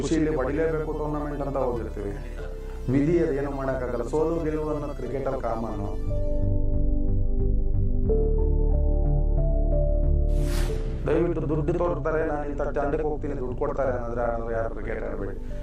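No technical faults can be heard anywhere in the audio, and the signal holds steady throughout.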